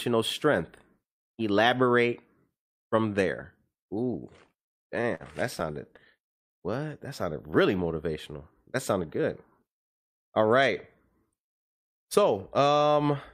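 Repeated stalls (stutter) from 4.47 to 5.23 s and again from 5.60 to 6.52 s: late packets kept emptying the jitter buffer, so the receiver stretched the last sound to fill five gaps (longest 49 ms), then eight (longest 100 ms). Nothing is lost, but the speech drags and stutters.

Jitter buffer speed-up from 8.78 to 9.20 s: with too much audio queued, the receiver trimmed roughly 40 ms in pitch-period slices, so the speech runs at 106% speed at unchanged pitch and sounds briefly hurried.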